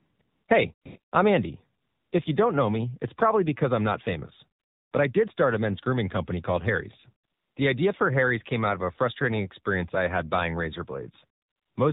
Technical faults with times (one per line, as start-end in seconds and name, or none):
0.00-11.92 AMR narrowband mobile codec
0.00-0.48 AMR comfort noise
0.74-1.12 AMR comfort noise
1.82-2.12 AMR comfort noise
4.60-4.92 AMR comfort noise
7.26-7.56 AMR comfort noise
11.40-11.76 AMR comfort noise